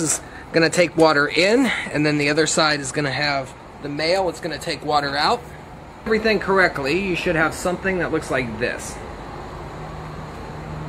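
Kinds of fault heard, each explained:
No faults can be heard anywhere in the clip.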